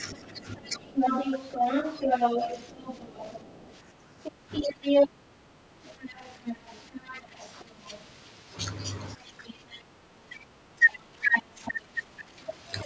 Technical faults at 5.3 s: other side's voice leaking through; background gated by the echo canceller

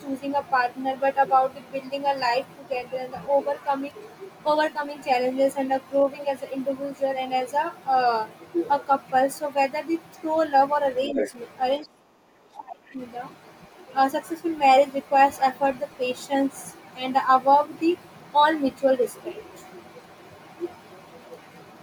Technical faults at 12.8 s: speech suppressed in double talk

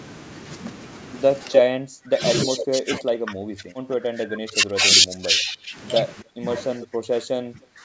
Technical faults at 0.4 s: none

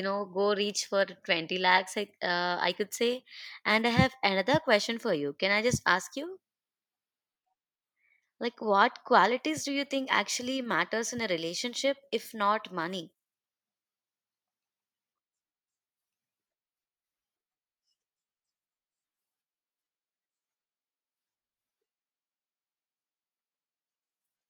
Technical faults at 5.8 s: resampler restarted on every block

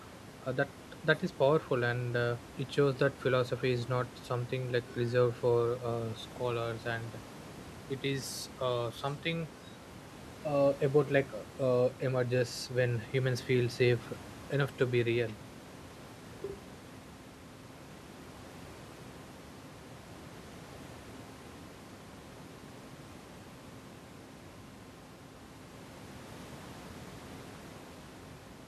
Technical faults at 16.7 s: none

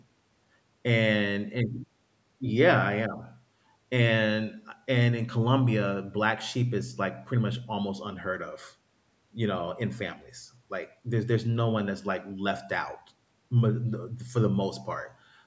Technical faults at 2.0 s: none

